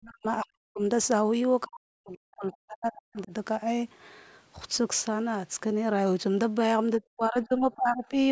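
An echo canceller likely confused the talker with loudspeaker echo during double talk and turned both down, so this speech clip has speech suppressed in double talk: it drops by about 40 dB or breaks up at 0 to 0.25 s, 0.41 to 0.81 s, 1.65 to 3.33 s and 6.99 to 8.13 s. The call microphone processing leaves nothing above 8 kHz.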